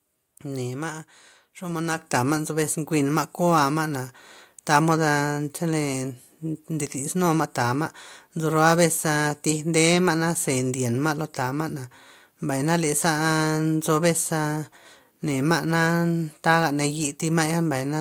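At 1.98 s, just before "tama' nzo bes", the microphone volume stepped up: the call software judged the input too quiet and raised the device gain by about 7 dB in one step. Speech and background noise jump louder together, with no fade.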